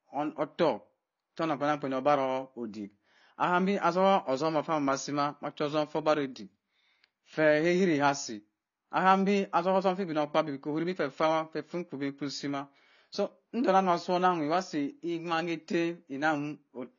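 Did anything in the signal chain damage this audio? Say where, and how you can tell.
Yes, at the codec stage: sibilants fizz and smear throughout with nothing above 6.9 kHz, likely AAC compression near 24 kbps. A plain low-pass wouldn't warble.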